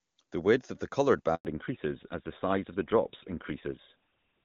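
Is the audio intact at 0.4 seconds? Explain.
Yes, the speech at 0.4 s is intact, with nothing at that moment that marks a fault.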